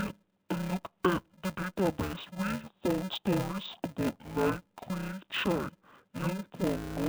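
Interleaved audio read as planar throughout: 2.67 ms blocks have their alternating samples split into halves, making the speech dull, robotic and buzzing at 375 Hz.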